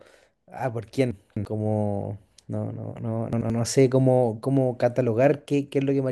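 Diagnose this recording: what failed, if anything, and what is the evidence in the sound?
Chunks out of order at the driver or buffer stage: at 1.11 to 1.45 s an 85 ms block plays three blocks late, and at 3.33 to 3.50 s one plays a block late. The speech jumbles at hard joins, shown as waveform steps and vertical spectrogram lines.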